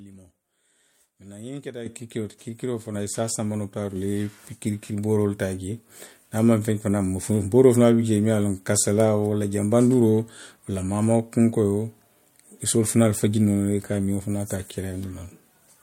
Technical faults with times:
1.86 microphone volume stepped up
2.94 microphone volume stepped up
3.96 microphone volume stepped up
4.98 microphone volume stepped up

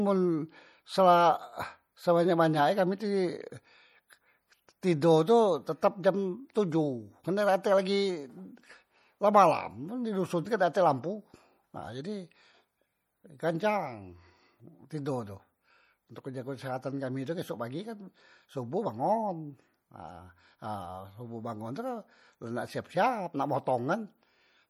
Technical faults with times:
0.00-24.70 MP3 compression

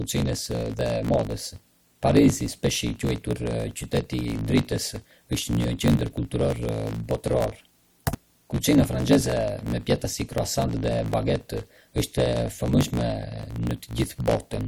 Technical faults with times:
0.00-14.68 low bit depth with dither
0.00-14.68 block size mismatch (truncated)

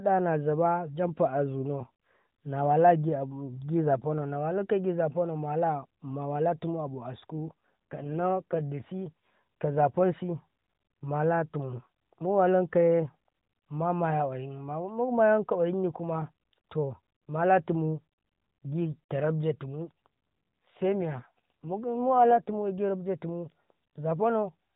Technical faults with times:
7.34-8.61 AMR rate drop
19.86-22.66 AMR rate drop

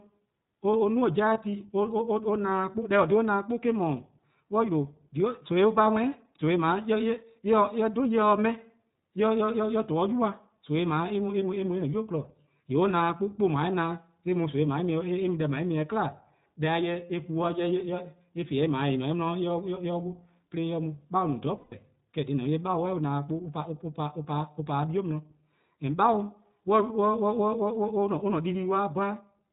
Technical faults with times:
0.00-29.52 iLBC codec
1.34-1.38 lost iLBC frames
21.57-21.74 lost iLBC frames

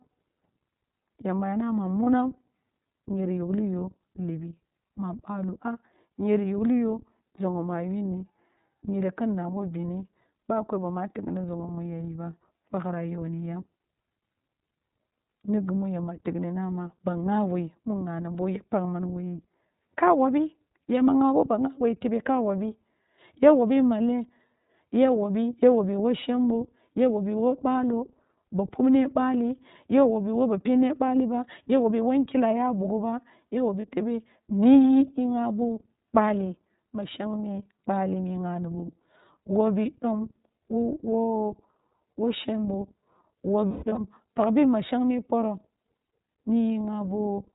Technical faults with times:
0.00-47.55 iLBC codec
2.04-2.08 lost iLBC frames
33.81-33.87 lost iLBC frames
43.68-43.98 lost iLBC frames

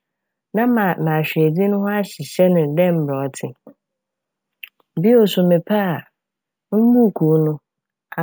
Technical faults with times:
0.00-8.23 imaging from sample-and-hold upsampling

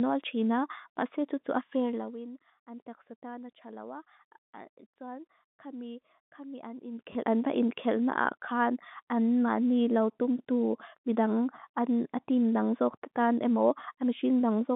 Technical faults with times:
1.76-2.18 zipper noise
6.82-7.34 zipper noise
7.13-7.15 packet loss with last packet repeated

